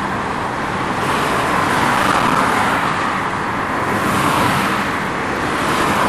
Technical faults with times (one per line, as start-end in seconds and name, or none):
1.95-2.35 processor overload crackle